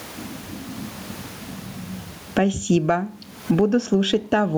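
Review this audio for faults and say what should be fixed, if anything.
Gain pumping runs through the whole clip, with the level swinging somewhere around 20 dB. The room noise sits about 43 dB below the speech. The likely cause is mic gain set far too high, with a fast limiter or compressor clamping down on each loud syllable. Fix it by lowering the input gain so the limiter barely touches the signal.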